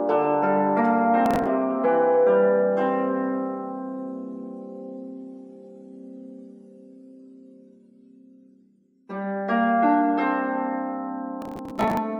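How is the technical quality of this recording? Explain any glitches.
The recording has two bursts of processor overload crackle, at 1.26 to 1.47 s and at 11.42 to 11.97 s. The second is longer. In both, the processor failed to fill short buffers of around 5 ms in time. Each missed buffer was skipped, not held, leaving a tiny hard-edged gap. A couple of dozen misses in the first burst and several dozen in the second run together into a gritty, tearing crackle over the sound.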